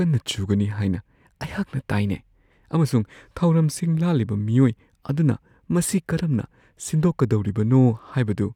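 Nothing in the speech stood out as a technical problem on listening.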